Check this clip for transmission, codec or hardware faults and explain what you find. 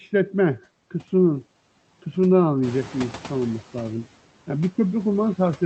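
Two faults here, both from the noise suppressor. One runs through the whole clip, and one is a short stretch where it falls behind after the background noise jumps.

Noise suppressor artifacts, throughout: the suppressor is pulling down about 10 dB in whatever bands it decides are steady noise, recalculating every frame. So the background dips in the gaps and swells back up under the speech.

Noise suppressor catching up, 2.62 to 3.93 s: right around 2.5 s the room noise climbs by roughly 16 dB, still sitting about 18 dB under the speech. The suppressor's noise estimate is still tuned to the quieter room, so the louder noise pushes through with less reduction at first. Over about 1.3 s the estimate catches up, and you can hear the noise sink back down as the cut settles at about 8 dB.

The call path sounds like Opus at around 24 kbps. The top end stops near 8 kHz, which fits its bandwidth setting.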